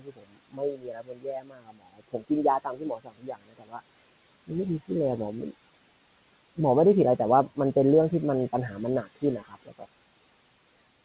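It's a speech recording, and the noise suppressor is working hard all the way through. It pulls the background down by about 21 dB, so the room noise, which sits roughly 17 dB under the voice, drops away between phrases and swells back beneath them. That suppressor also eats into the speech itself. From 0.00 to 3.81 s, about three seconds of it sounds swallowed, dipping by as much as about 22 dB, and again from 9.03 to 9.86 s, a shorter stretch of roughly 0.4 s drops by about 21 dB, with soft edges and word endings going faint because they were treated as noise. Underneath, the band stops at 4 kHz, which fits a G.711 narrowband call link at 64 kbps.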